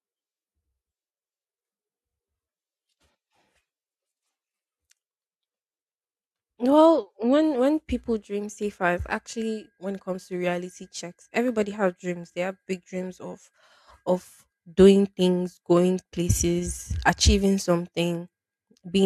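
No technical faults can be heard anywhere in this recording.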